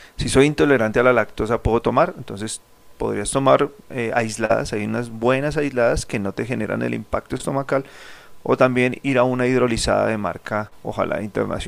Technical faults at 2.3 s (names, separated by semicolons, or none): none